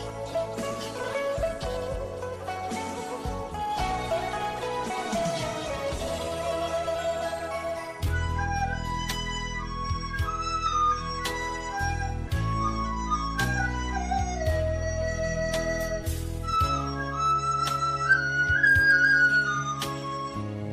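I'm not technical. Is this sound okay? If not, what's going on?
Yes, no faults heard.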